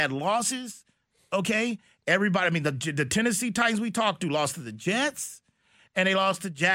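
Nothing goes wrong anywhere in this bit of speech, so there's no fault to point to at any moment.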